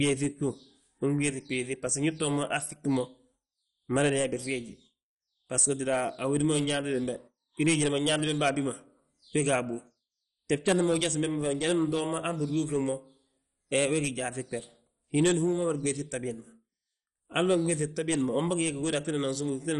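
Throughout the recording, the speech has likely passed through MP2 compression at a starved bitrate, with the damage sitting near what a 48 kbps stream would produce. The coder, short of bits, has shut off its upper sub-bands entirely, so nothing remains above about 11.3 kHz, and the bands it keeps are quantised coarsely. The result is dull, muffled speech carrying a plainly audible gurgling, grainy distortion, with the upper detail seeming to flicker in and out.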